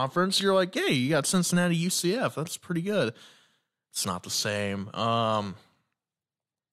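A short speech recording with no technical fault to report. Nothing in it calls for a time or a cause.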